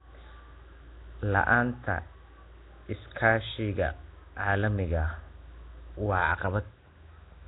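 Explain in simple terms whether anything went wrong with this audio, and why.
Throughout the speech there is a rough, hissy, underwater sound with nothing above 3.9 kHz, likely from heavy Nellymoser compression, an old Flash-era voice codec.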